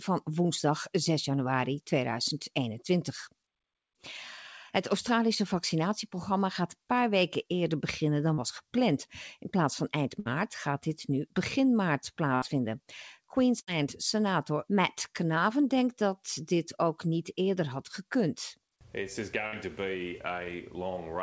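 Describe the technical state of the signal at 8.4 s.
Short concealed packet loss, 8.34 to 8.39 s: about 40 ms never arrived and was filled by continuing the preceding sound. The result is a brief smear rather than a silent dropout.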